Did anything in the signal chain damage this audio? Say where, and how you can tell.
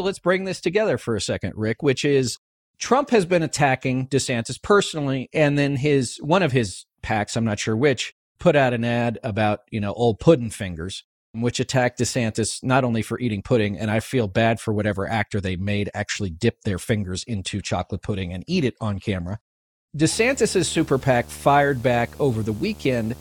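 Yes. A video or display buzz entered through the analogue wiring from 20.12 s to the end of the clip at 23.21 s. A screen or its video cable was coupling interference into the audio path, so the speech picks up a buzz at the picture's 75 Hz field rate with a layer of hash above it. The buzz sits roughly 20 dB below the speech for those final three seconds.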